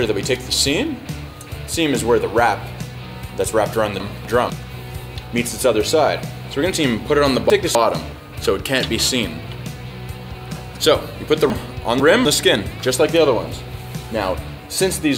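Chunks out of order: 250 ms blocks were delivered late and replayed one, three and two blocks behind their place, at 4.0–4.5 s, 6.75–7.75 s and 11.5–12.25 s. Nothing is missing, but each stretch sounds jumbled, with hard joins between blocks.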